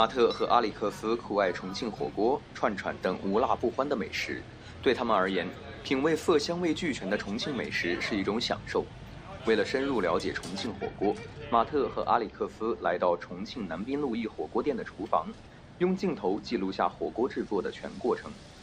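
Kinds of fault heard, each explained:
De-emphasis applied wrongly: a treble cut for undoing pre-emphasis, misapplied, dulls the sound from 10.67 s on, sloping to about 14 dB down at 10 kHz.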